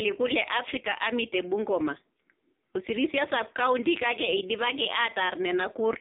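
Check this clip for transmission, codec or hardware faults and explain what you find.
One fault runs through the whole clip: the speech has the AMR narrowband mobile codec character. It sounds thin, boxed-in and distinctly buzzy, with a synthetic edge on every syllable, because the band is squeezed to roughly 250 Hz to 3.7 kHz and nothing above 3.7 kHz survives. AMR-NB samples at 8 kHz and rebuilds the voice from a vocal-tract model fed by sparse pulses in short subframes. The heavy damage here fits a low mode around 5.9 kbps.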